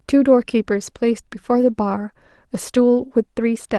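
At 1.49 s a single 20 ms stretch of the speech turns briefly rough and noisy: a lost packet rebuilt from error correction, with the next packet's low-bitrate copy of the Opus audio filling the slot. Unlike concealment, there is no gap, smeared repeat or metallic buzz, only a coarser frame within the call's normal 12 kHz band.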